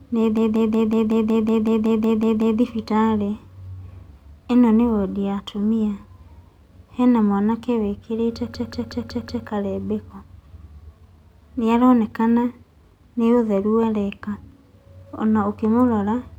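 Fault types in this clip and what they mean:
System hang loop: from 0.37 to 2.60 s, and again from 8.55 to 9.47 s just after "mwanake wĩkĩrĩte", the playback froze while the sound hardware kept replaying the same ring buffer. A fragment of speech about 186 ms long repeats exactly, 12 times and then 5 times, at 5.38 Hz, a machine-gun stutter that fits an 8192-sample buffer. Speech resumes where it stopped, with essentially nothing lost.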